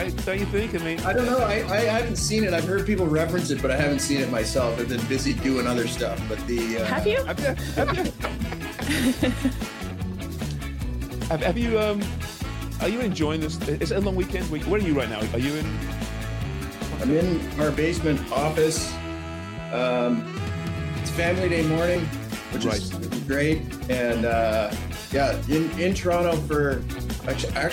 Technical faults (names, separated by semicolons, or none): damaged data in a compressed stream